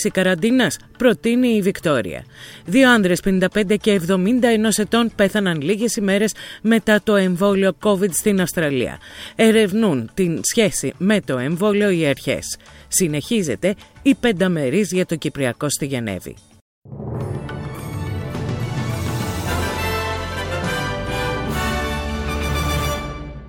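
From start to finish, sample clock jitter is present. The converter's clock wavers by around a microsecond or two, so samples land slightly off time. The resulting error sits about 40 dB below the signal. It is heard as a rough hiss that swells on loud, bright passages and disappears in silence.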